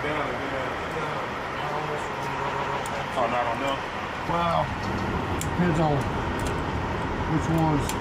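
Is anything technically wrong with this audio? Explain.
Yes, there are repeated frames in two places. At 2.51 s a 139 ms block plays three times in a row, stretching to 2.79 s and adding about 279 ms. At 4.97 s the same length of block plays twice, adding 139 ms. A run of compressed frames was duplicated in the stream, which fits about six frames per block, so the decoder simply replays it. You hear a stutter.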